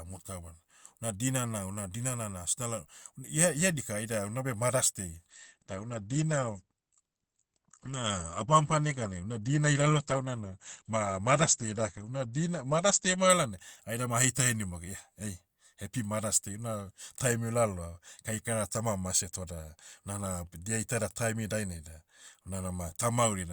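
From 5.3 to 13.3 s, after "unabe mothers day", the speech switches abruptly to an adaptive stream at a lower bitrate. Nothing remains above 8.6 kHz. Artefacts rise, which fits Opus falling from 64 to 16 kbit/s. Full quality returns before "laonai aida ma aheita".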